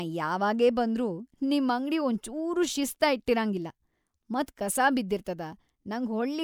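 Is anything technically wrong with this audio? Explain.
No, no technical faults heard.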